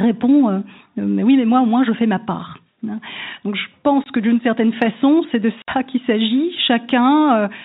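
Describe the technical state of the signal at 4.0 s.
At 4.04 s one packet failed to arrive, and the receiver had nothing to play, so it filled the gap with silence. This is packet loss filled with silence. The speech drops out abruptly for 20 ms, which fits a single 20 ms packet, ending at 4.06 s just before "que d'une certaine façon". Both edges of the hole are hard cuts. Around the dropout, the G.711 telephone band stays limited to below 4 kHz.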